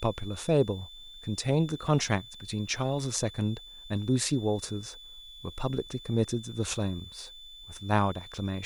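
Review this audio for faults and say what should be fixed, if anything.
Switching supply whistle runs throughout the speech: a thin tone wandering between 3.47 and 3.53 kHz, roughly 20 dB below the voice. A nearby switch-mode power supply is cycling in an audible burst mode, and its ripple leaks into the audio path. To prevent it, power the recording chain from a linear or well-filtered supply, keep chargers and adapters away from it, and use balanced, grounded cabling.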